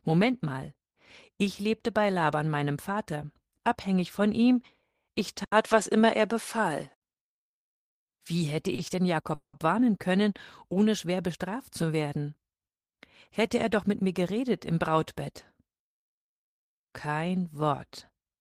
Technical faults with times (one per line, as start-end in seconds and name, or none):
5.44-7.02 input switched to a poorer device
8.75-8.81 short stall from a late packet
9.34-9.67 call audio freeze
13.39-14.20 jitter buffer speed-up